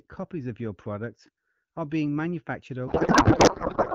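Up to 2.87 s the speech comes through the AMR wideband (HD Voice) codec cleanly, with only light coding texture that fits a rate around 12.65 kbit/s. From 2.87 s to the end, a codec payload misread takes over. Octet-aligned AMR frames are being unpacked as bandwidth-efficient, so every field lands in the wrong place. The speech turns into garbled, warbling noise that barely tracks it. Unlike packet loss, there are no gaps or repeats, and the breakup never recovers.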